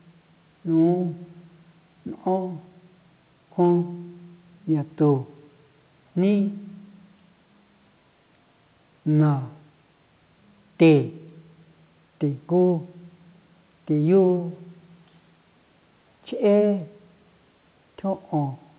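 Nothing goes wrong anywhere in the recording; there's a faint room hush sitting about 44 dB under the speech, and the call line keeps everything below 4 kHz, which is just how that path normally sounds.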